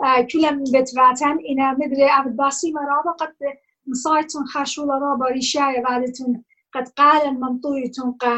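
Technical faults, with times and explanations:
Throughout: clock drift between sender and receiver. The sender's audio clock runs roughly 2% slower than the receiver's, so the jitter buffer keeps draining and the receiver must stretch playback to avoid running dry. The result is small timing irregularities that recur across the whole clip rather than one obvious break.
0.18–7.75 s: repeated timing corrections. To keep pace with the slow sender, the receiver repeatedly repeats short fragments, always lengthening and at uneven intervals. Playback runs at about 98% speed, adding about a fifth of a second overall.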